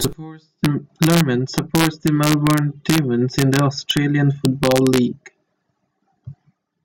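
Integer overflow at 0.05 s, 0.65 s, 1.03 to 1.21 s, 1.58 to 2.98 s, 3.39 to 3.97 s and 4.45 to 4.98 s: loud speech peaks exceed the integer range, pushed only about 0 to 1 dB over, and wrap to the opposite sign instead of limiting, giving violent cracks far harsher than clipping.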